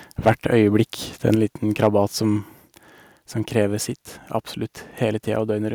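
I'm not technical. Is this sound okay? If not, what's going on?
No. The microphone was likely set too loud, causing microphone overload: the loudest moments of speech at 0.26 to 0.32 s and 1.83 to 1.86 s get their peaks cut off, sounding harsh and crackly. At 1.35 s, the microphone volume stepped down, likely the call software turning the input down in one go, so the speech and background suddenly become quieter.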